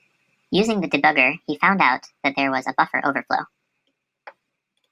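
From start to finish there's a wrong sample rate: the speech runs about 1.45 times fast and sits roughly 6.5 semitones high, consistent with 22 kHz audio played at 32 kHz.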